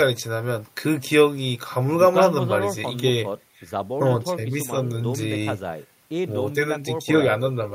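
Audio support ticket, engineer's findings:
No audible faults found in the signal path on review of the speech clip; no dropouts, level problems or processing faults to attribute to any component.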